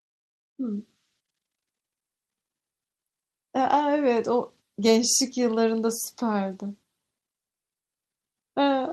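Nothing stood out as a technical fault on listening to this speech recording.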